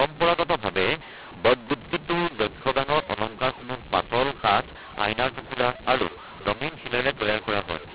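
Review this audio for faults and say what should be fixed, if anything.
The speech is harsh and gritty from start to finish, with pauses filled by a constant hiss. This points to mu-law and A-law mixed up: the telephone audio was coded as A-law but decoded as mu-law, so every sample's level is misread. Some come out too loud, others too quiet, and near-silent samples jump well above silence. Unlike clipping, the distortion is not confined to loud passages. The 4 kHz-limited telephone band itself comes through as expected. Prevent this by declaring the G.711 law explicitly at both ends of the link.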